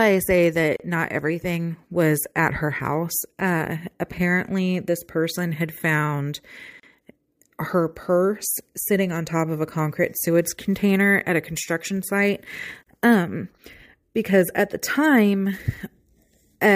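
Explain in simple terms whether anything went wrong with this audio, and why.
Gap at a join of encoded pieces at 0.76 s (after "I say"), 6.80 s and 12.83 s. Separately encoded chunks were stitched without trimming their padding, leaving a 34 ms silence every 6 seconds.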